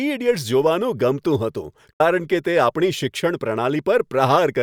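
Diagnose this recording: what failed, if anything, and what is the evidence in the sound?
A digital broadcast dropout at the receiver's decoding stage: bad frames muted output, so speech fades over 8 ms to silence from 1.93 to 2.01 s, that material lost.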